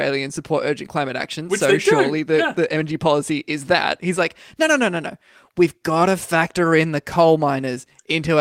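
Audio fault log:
No faults heard anywhere in the speech.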